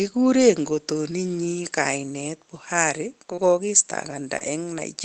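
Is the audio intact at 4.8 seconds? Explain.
No. From 4.78 to 4.80 s, a lost packet was rebuilt from error correction: a rougher, noisier 20 ms copy fills it, with no waveform gap but a grainier spectrogram slice.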